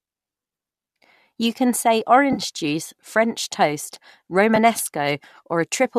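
At 2.33 s, just after "can say", AAC frame loss with concealment lasts to 2.40 s. About 40 ms of audio is missing, which fits four lost 10 ms frames from a low-delay encoder, likely AAC-ELD. The decoder fills the gap by extending the last good spectrum, so the speech smears into a brief noisy, phasey patch instead of going silent. A second, single-frame loss at 4.56 s leaves a shorter blur.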